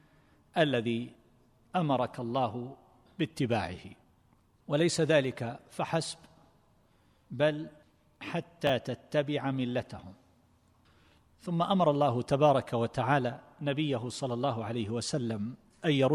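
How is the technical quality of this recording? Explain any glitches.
The recording has one glitch, with chunks out of order between 8.67 and 8.69 s. A roughly 10.7 ms block of audio was delivered one chunk late and played after its successor. Nothing is missing, but the swapped blocks create three hard joins, heard as a brief jumbled flicker.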